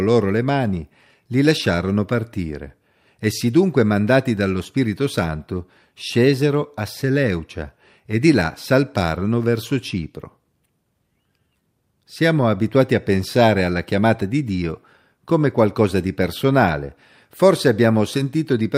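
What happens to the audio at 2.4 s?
Nothing goes wrong at 2.4 s; the speech plays through that moment intact, with no dropout, click, distortion or other audible fault.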